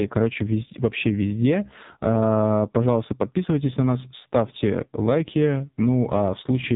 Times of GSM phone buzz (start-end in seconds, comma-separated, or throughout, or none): none